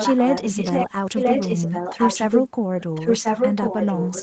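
A loudspeaker echo canceller likely failed to remove the far end, so an echo leak returns the speech about 1.05 s late, roughly as loud as the original, from 0 to 0.9 s, 1.15 to 2.48 s and 2.8 s to the end.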